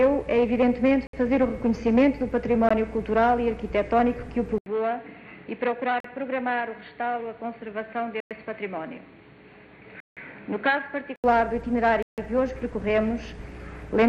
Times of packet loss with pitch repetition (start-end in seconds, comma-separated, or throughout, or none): none